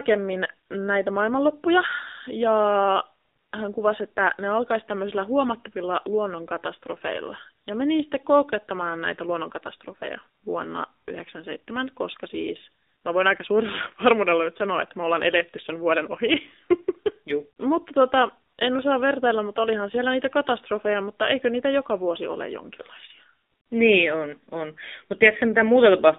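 From start to finish the speech has AMR narrowband mobile codec damage: a 250 Hz to 3.7 kHz band plus a buzzy, synthetic timbre, fitting roughly 7.4 kbps, that plain filtering wouldn't cause.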